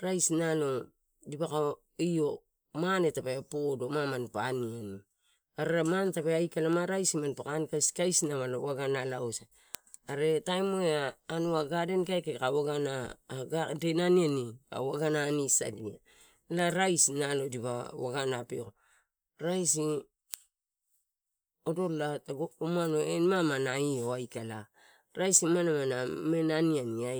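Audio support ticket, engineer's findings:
Digital receiver not locked to sender's word clock, roughly 15 ppm apart; single-sample slips cause word clock ticks, sharp and uneven, about every 1.5 s, 0.68–26.39 s.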